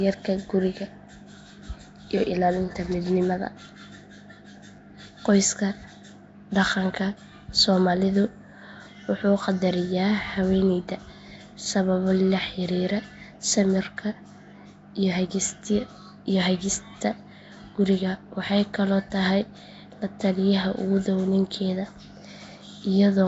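Speech, with a rough, hissy halo and a smeared, underwater quality all the way through, plus nothing at all above about 7.7 kHz. That's likely Nellymoser compression, the old Flash codec starving weak bands and filling them with noise, which fits roughly 32 kbps.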